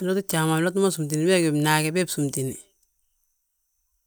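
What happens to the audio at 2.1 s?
Nothing goes wrong at 2.1 s; the speech carries on there without any audible fault.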